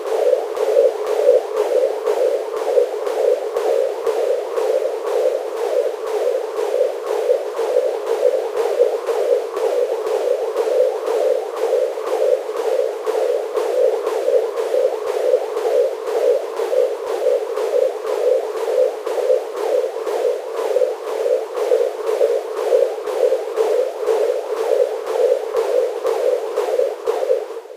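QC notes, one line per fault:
No fault is heard anywhere in this recording of sounds. There is nothing to log against any time in the clip.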